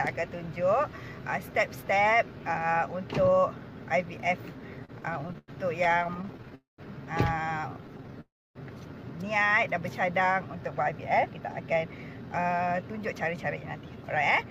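From 4.77 to 6.53 s the audio shows repeated stalls (stutter): packets kept arriving late, the jitter buffer ran dry 27 times, and the receiver stretched the last sound to cover 379 ms, about 22% of that span, with the longest hold 96 ms. Nothing is lost, but the sound drags and catches.

At 6.55 s a call audio freeze follows: the sound hangs for 233 ms, decaying into about 160 ms of silence before resuming where it stopped. The likely cause is a hold-up in packet delivery that emptied the buffer, adding the same 233 ms of delay.

Between 7.61 and 8.17 s a jitter buffer slow-down plays the audio at 86% speed with unchanged pitch, repeating pitch periods to add 87 ms of reserve, so the sound is drawn out. Within it, from 7.87 to 8.10 s, four brief stalls of at most 10 ms add stutter.

A second call audio freeze runs from 8.21 to 8.57 s: 347 ms held, about 280 ms of it silent, likely again from delayed packets, raising the delay by 347 ms.

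From 10.55 s to the end, a jitter buffer speed-up trims short pitch-period pieces, running the audio at 110% speed at the same pitch and removing about 0.4 s, so it sounds noticeably hurried.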